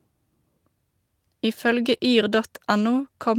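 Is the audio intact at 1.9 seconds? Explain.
No. A lost packet rebuilt from error correction covers 1.93 to 1.95 s. The 20 ms stretch, consistent with a single lost packet, was replaced by a low-bitrate backup copy carried in the following packet, so there is no silence. The decoder played that coarser copy, and for that instant the speech turns rougher and noisier before full quality returns.

Right after, from 1.97 to 2.01 s, comes a short concealed packet loss. About 20 ms of speech never arrived in time, and no backup existed. The decoder extended the preceding sound by continuing its pitch where voiced or shaping noise where not, with roughly 14 ms of synthesised fill blended back into the real signal. It is heard as a brief smear or wobble, and a quick consonant there can drop out.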